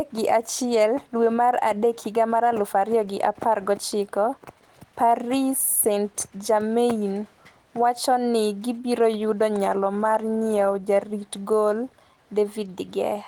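There are no technical faults in this speech clip to describe in time order.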